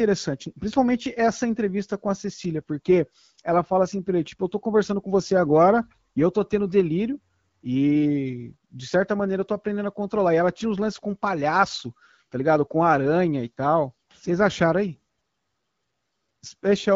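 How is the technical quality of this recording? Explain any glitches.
No glitches turn up anywhere in the recording. The speech comes through the AMR wideband (HD Voice) codec at 12.65 kbit/s, where the band reaches about 7 kHz and the coding leaves only a light trace on the speech.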